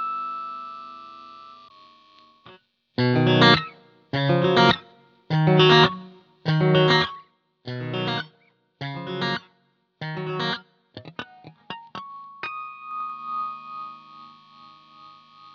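A fast ticking rides on the sound from 6.78 to 7.34 s as the level drops by roughly 10 dB, and again from 12.82 to 13.28 s as it rises back. This is zipper noise: the gain moves in unsmoothed 2 dB steps, about ten per second, each leaving a small click.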